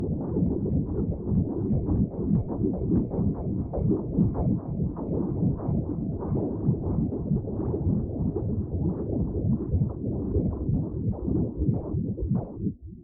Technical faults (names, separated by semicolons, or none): none